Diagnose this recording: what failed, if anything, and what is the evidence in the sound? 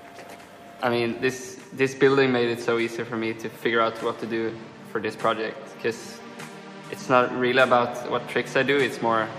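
Nothing failed: no stage of the chain leaves any audible evidence of a fault anywhere in the sound.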